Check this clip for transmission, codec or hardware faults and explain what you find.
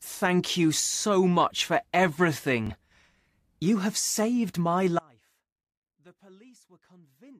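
Two faults are audible: a brief Bluetooth stutter and a dropout that lasts to the end.

From 2.67 to 2.70 s there is a Bluetooth stutter. About 21 ms of audio never arrived in time, which fits a single lost packet. The receiver filled the hole by replaying its last short slice of audio. You hear a quick repeat, a tiny hiccup in the speech. The voice then resumes slightly further on, as though it had kept playing through the gap.

At 4.99 s, right after "saved my", the speech drops out to a faint residue and stays there until the clip ends. The cut is abrupt. It is not a pause or a fade. What remains is a faint trace of sound, roughly 30 dB below the normal level. The likely cause is a loss of the wanted signal while the path after the break stayed live, so a faint sound still gets through.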